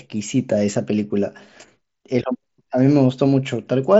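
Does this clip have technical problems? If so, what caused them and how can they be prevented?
Yes: concealed Bluetooth headset packet loss at 0.74 s, where about 7.5 ms of speech, consistent with a single lost packet, was patched by repeating the best-matching recent waveform stretch. A spectrogram shows a brief smeared column. Keeping the phone close to the mSBC headset, away from Wi-Fi interference, prevents it.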